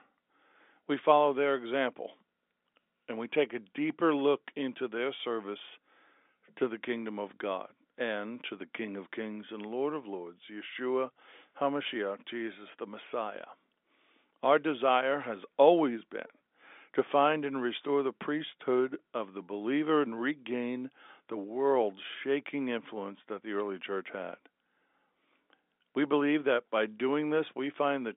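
Nothing goes wrong in this telephone-band speech recording.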